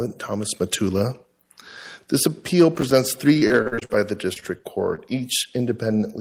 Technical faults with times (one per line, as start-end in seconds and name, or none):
2.75-2.91 processor overload crackle
3.33-4.00 repeated packet loss (robotic sound)
4.33-4.99 repeated packet loss (robotic sound)